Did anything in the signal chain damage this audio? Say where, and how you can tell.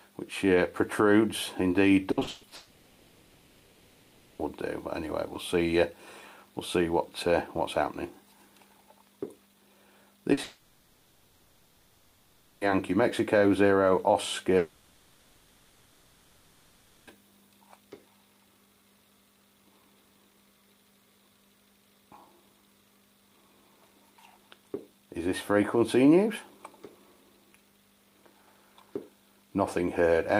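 Yes, the damage happened in the network stage. From 2.11 to 2.53 s the sound turns choppy. This is repeated packet loss (robotic sound). Five gaps, the longest 140 ms, were patched by extending earlier audio, so about two-thirds of that stretch is concealment rather than real signal.

From 2.55 to 4.41 s, 10.43 to 12.63 s and 14.57 to 17.09 s, the sound gives way to a drawn-out buzz or hiss that fades, then resumes with material missing. These spans of roughly 1.8, 2.2 and 2.5 s are likely long network dropouts, where the receiver kept filling in while nothing arrived.

At 10.33 to 10.39 s there is a brief smear or wobble lasting 40 ms. This is short concealed packet loss: a small chunk missed the decoder's deadline, so the receiver extrapolated the preceding sound and blended back into the real audio.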